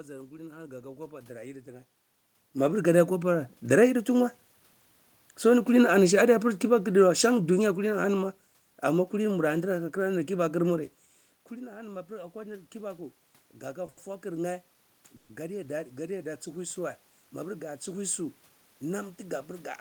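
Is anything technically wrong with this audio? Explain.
Yes. Several system faults affect this speech recording, all of them in level control and in the delivery of the call audio.

Automatic gain rising happens twice. From 2.53 to 4.42 s, just after the talker moves away from the microphone at about 2 s, the gain control reacts to the quieter input and gradually raises its gain by about 7 dB. Voice and room noise swell together over nearly two seconds. From 11.5 to 16.75 s the input drops by about 16 dB as the talker moves again, and the gain climbs by about 6 dB over more than five seconds. On a waveform the envelope ramps up smoothly, noise floor included. A spectrogram brightens evenly across all bands.

Automatic gain falling runs from 5.78 to 8.28 s, right after "so eni". The gain control judges the level too loud and pulls it down by about 5 dB over two and a half seconds, so the speech starts loud and sinks along with the background noise. 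A waveform shows the whole envelope tapering, with the noise floor tapering too. A spectrogram dims uniformly rather than in any one band.

A short stall from a late packet occurs twice in a row, at 13.86 s for 20 ms and from 13.89 to 13.98 s for 80 ms. Each time a packet arrived late and the jitter buffer ran dry, so the receiver held the last sound until the audio caught up. Nothing is lost, but a sound lingers unnaturally with a faint buzz. A spectrogram shows frozen horizontal harmonic streaks where the speech should move.

A call audio freeze lasts from 15.16 to 15.30 s, about 130 ms. The last sound is extended as a fading buzzy tone and never drops to true silence, then the speech resumes where it left off. The likely cause is packets held up in transit, which empties the jitter buffer. On a spectrogram a static, smeared band decays across the gap. A waveform shows a repeating, shrinking pattern in that span.

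A jitter buffer speed-up runs from 18.49 to 19.33 s. The buffer had built up excess delay, so the receiver cut many tiny pitch-period slices, roughly 70 ms in all. The speech plays about 8% faster at unchanged pitch and sounds slightly hurried. A spectrogram keeps the harmonic spacing but compresses the timing of syllables. A waveform shows the segments packed slightly closer together.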